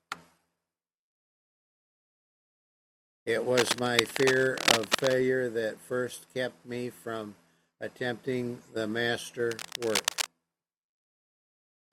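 Cable scratch noise appears from 3.57 to 5.15 s and again from 9.51 to 10.28 s. Dense, irregular bursts of scratching and rustling sit over the speech, roughly as loud as it in the first stretch and somewhat quieter in the second. The likely cause is a worn cable, connector or control being moved, so that its contact resistance jumps about rapidly and injects crackling noise into the signal for as long as it is disturbed.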